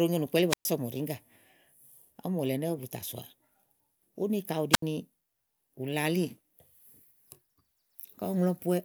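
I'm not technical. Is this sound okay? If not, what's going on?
No, there's a problem. Twice the audio briefly cuts out: from 0.49 to 0.65 s (silent for about 0.12 s) and from 4.71 to 4.82 s (silent for about 0.07 s). This is a wireless microphone squelch dropout. The radio link between the mic and its receiver got too weak for a moment, so the receiver muted itself to avoid blasting static. You hear a quick burst of hiss, a tiny gap of near silence, then the speech coming back.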